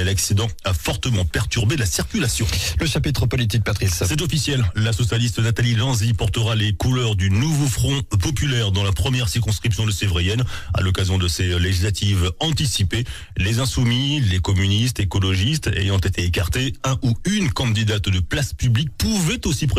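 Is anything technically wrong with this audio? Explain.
No, nothing technically wrong can be heard here.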